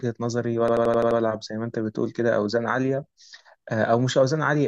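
From 0.68 to 1.20 s a system hang loop replays one 85 ms slice about six times, a machine-gun stutter near 11.7 Hz, which fits a 4096-sample ring buffer cycling while the driver froze. Unlike a dropout, there is no silence, only identical repeats.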